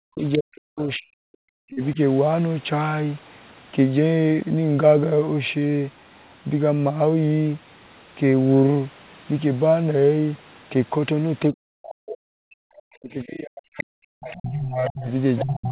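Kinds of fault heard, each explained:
Speech suppressed in double talk: In the opening two seconds and again from 11.52 s to the end, the talker sinks by as much as about 40 dB in patches. It's likely the echo canceller getting confused while both ends talk and ducking everything.
Other side's voice leaking through: A second voice bleeds in from the talker's loudspeaker, first as a brief scrap at 0.33 s, then from 11.45 to 12.17 s and 13.78 to 15.44 s. It gets louder each time, from about 20 dB down to about 10 dB below the speech, and is likely residual echo the canceller missed.
Short stall from a late packet: Around 1.73 to 1.78 s the sound hangs for roughly 36 ms. The jitter buffer ran dry, so the last bit was stretched until the packet turned up. Nothing's actually lost, just a brief held moment with a slight buzz or dip.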